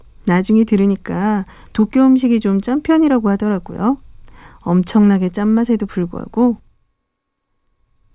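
No technical faults are audible.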